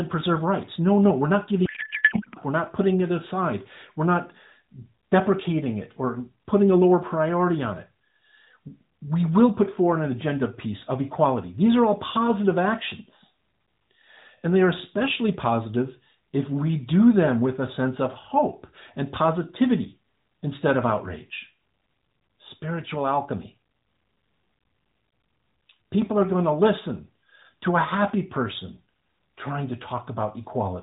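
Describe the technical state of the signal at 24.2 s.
At 24.2 s the audio is intact, with no fault, only the expected narrowband mobile-codec character, nothing above 4 kHz and the light coloration that fits AMR-NB at around 12.2 kbps.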